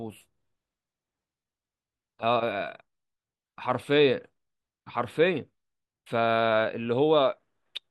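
Listening to the speech recording, nothing in it stood out as a technical problem.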